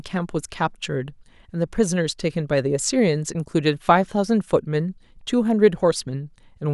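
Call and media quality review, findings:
No faults found in the speech recording. Nothing heard calls for a ticket entry.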